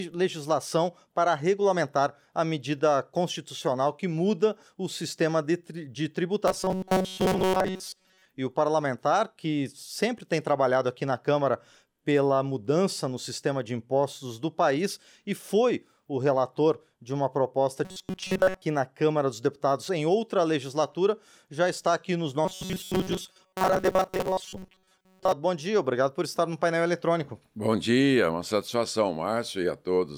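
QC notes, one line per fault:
6.48–8.25 s, 17.85–18.62 s, 22.45–25.32 s: robotic sound from repeated short buffers. In each span the audio collapses into a rigid, metallic buzz at 188 Hz that tracks the original only loosely. The likely cause is incoming audio arriving too seldom, with the playback path looping a segment of about 5.3 ms (the period of 188 Hz) to fill the gaps. Roughly two thirds or more of the time is repeated material, and the real audio in those stretches is skipped.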